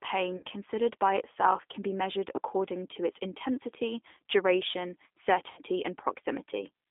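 Speech heard through a G.729 codec: the whole recording is squeezed into a line band of roughly 250 Hz to 3.6 kHz, with nothing above that. The rough, slightly synthetic texture of a low-rate CELP coder rebuilding the voice from a filter and a handful of pulses per frame points to 8 kbit/s G.729A. Plain band-limiting would sound thin but clean. Here the damage is plainly audible grit within the band. There are also three spots of VoIP packet loss concealed by the speech codec. The first runs from 0.37 to 0.45 s, just before "considered by itself can", and covers about 60 ms of missing audio. The second runs from 2.36 to 2.40 s, between "itself can be measured" and "to its intensity duration", and covers about 20 ms. The third runs from 5.51 to 5.61 s, after "to its intensity duration", and also covers about 60 ms, which fits three lost 20 ms packets. In each spot the decoder stretches the last sound into a buzzy tone or coloured noise that fades, and the voice stays weak for a moment afterwards. 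Simple dropouts would cut straight to silence and recover at once, and that is what tells these apart.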